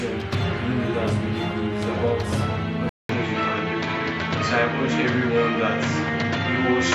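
At 2.89 s the audio drops out for about 200 ms, then returns duller, with nothing above 7.6 kHz and a faint new background noise at much the same level through to the end, likely because the input switched to a poorer device.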